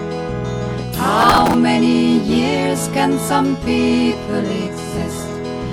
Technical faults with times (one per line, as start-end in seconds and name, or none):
1.21-1.54 processor overload crackle